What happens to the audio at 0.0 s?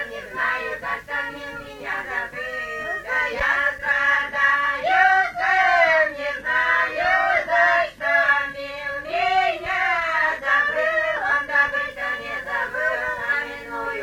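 Nothing goes wrong at 0.0 s; the audio is intact at that moment.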